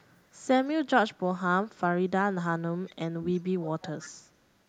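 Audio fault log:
0.00–0.06, 0.23–0.45, 3.31–3.43, 3.60–4.45 s: echo leak. A 334 ms delayed copy of the speech, about 40 dB down early and about 20 dB down by the end, is likely loudspeaker pickup the echo canceller missed.
2.84–3.25 s: speech suppressed in double talk. Speech dips by up to about 30 dB, roughly 0.3 s in total, likely the canceller attenuating the talker during overlap.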